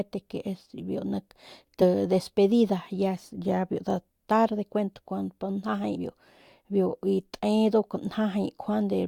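At 1.81 to 1.84 s, compressed frames are skipped. The audio jumps ahead roughly 40 ms, which fits two 20 ms frames. At 5.95 s it jumps about 70 ms.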